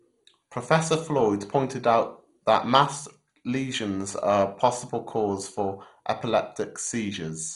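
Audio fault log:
throughout, MP2 compression: dull, gurgling, granular speech with nothing above 11.2 kHz, likely Layer II coding near 56 kbps switching off starved upper sub-bands.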